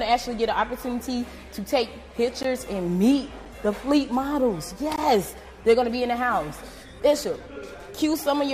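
At 2.43 s and again at 4.96 s there's a block of digital silence, a 15 ms then 17 ms dropout, where the sound cuts out and back with no fade each time.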